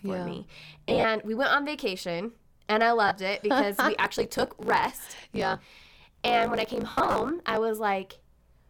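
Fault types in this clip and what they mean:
lost LE Audio frames: Bluetooth LE Audio frames went missing and the LC3 decoder covered the holes by replaying the last spectrum with its signs scrambled, so each gap comes out as a noisy smear. The worst patches are 0.89–1.04 s, where about 113 ms drops out across 150 ms with runs up to roughly 40 ms, and 6.90–7.16 s, where around 200 ms goes over 255 ms with runs near 70 ms. A brief 30 ms blip also shows at 3.08 s.
block size mismatch (truncated): One stage hands over bigger blocks than the next stage takes, and the leftover tail of each block gets chopped off. From 3.95 to 7.58 s that gives a steady 54.4 Hz buzz at the block rate, and the speech runs about 1.16 times fast while its timbre stays, which fits 1024-sample blocks being cut short. The late dropout patch around 7 s sits inside this stretch.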